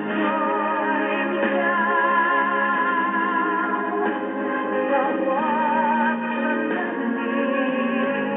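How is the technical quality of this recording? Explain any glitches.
No glitches turn up anywhere in this recording; there are no dropouts, clicks or stutters to point to, so there's nothing here that needs explaining.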